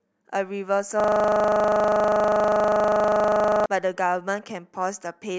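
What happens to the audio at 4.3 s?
Nothing goes wrong at 4.3 s; the speech carries on intact through that moment, with no dropout, click or distortion.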